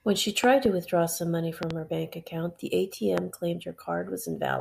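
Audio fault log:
0.44 to 3.20 s, loud pop: a double pop at 0.44 to 0.68 s and 1.63 to 1.73 s, and a single pop at 3.18 to 3.20 s, each peaking roughly 15 dB above the speech, which continues underneath. A sudden voltage step or spike, likely from a plug, switch, static discharge or driver glitch, was added to the signal and shaped by the circuits after it. On the waveform each pop is a tall, narrow spike; on the spectrogram, a bright vertical stripe across all frequencies.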